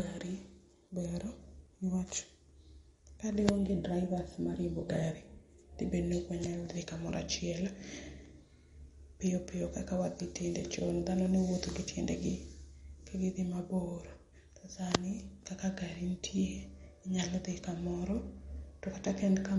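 Throughout, the speech sounds plainly watery and swirly, with nothing above 11.2 kHz. Likely MP3 compression, which fits a bitrate near 48 kbps.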